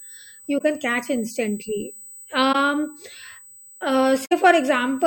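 A steady USB whine sits under the whole recording at 8 kHz, roughly 25 dB below the speech. Current drawn in 125-microsecond bus microframes is leaking through power or ground. It is a thin, fixed-pitch whistle that shows on a spectrogram as an unbroken horizontal line at 8 kHz.

A corrupt frame concealed by the decoder appears at 0.58 to 0.61 s, again at 2.52 to 2.55 s, and over a longer stretch from 4.25 to 4.33 s. The first two fit one damaged AAC frame each, the last several in a row. The decoder covered them. On a spectrogram these are brief vertical gaps or blurred columns, and the waveform shows rounded notches rather than clicks.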